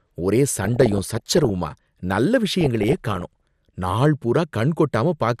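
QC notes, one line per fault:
Throughout: MP2 compression. The speech sounds dull and clearly damaged, with a gurgling, grainy texture where upper frequencies come and go. This is likely MPEG Layer II coding at a low rate, and the character fits around 80 kbps. At that rate many of the 32 sub-bands lack bits. The highest ones get switched off and flicker in and out, and the bands that remain are quantised so coarsely that the granular distortion rides on the speech.
0.65–1.50 s and 2.47–3.21 s: DAB burbling. The sound breaks into a burble of short noise blips and sub-band level jumps laid over the speech, somewhat heavier in the first stretch than the second. Reception errors are getting past the error correction into the audio data. Corrupted samples put short blips of noise into single sub-bands, and corrupted scale factors make sub-bands leap in level for up to a frame, and a rapid run of such errors gives the burble.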